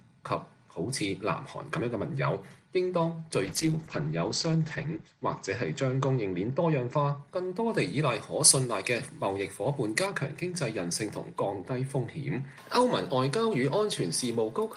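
From 3.47 to 7.25 s, a call bitrate drop takes the stream from 32 to 10 kbps. Bandwidth narrows from 20 kHz to 8 kHz, leaving the sound muffled, rough and watery. From 7.72 to 10.06 s, pre-emphasis is left on. The treble boost, matching an FM 75 µs curve, goes uncorrected and lifts 10 kHz by about 14 dB. The sound turns thin, bright and sibilant.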